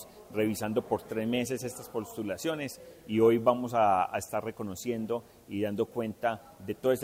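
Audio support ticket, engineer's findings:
Constant, even hiss across the whole clip, roughly 35 dB under the signal, with no distortion or grit. Cause: low bit depth with dither, which fits a 9-bit path. Dither added before rounding turns quantisation error into steady white noise.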